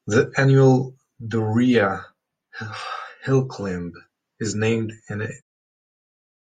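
There are no technical faults to describe in this speech, and the level simply eases down in an editor's fade-out over the last second.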